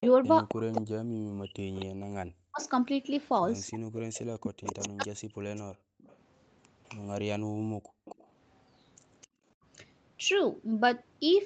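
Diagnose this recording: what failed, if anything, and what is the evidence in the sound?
Call processing: the echo canceller, likely confused by both sides talking at once, cut the speech between 0.00 and 5.73 s. This caused speech suppressed in double talk, with roughly three seconds of dips reaching around 40 dB.

Call processing: the far end's echo canceller likely missed part of its loudspeaker pickup. The resulting echo leak is a copy delayed by 262 ms, roughly 10 dB below the speech, from 0.01 to 9.27 s.

Call processing: the echo canceller clamped the microphone while the loudspeaker played. This background gating by the echo canceller makes the room sound drop by about 39 dB for brief stretches, under a second in all, between 7.45 and 9.46 s.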